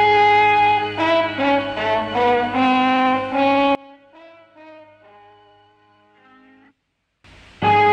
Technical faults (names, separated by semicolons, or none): one channel inverted